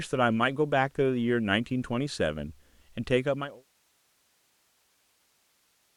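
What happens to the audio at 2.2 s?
At 2.2 s the speech carries on intact, with no dropout, click or other fault.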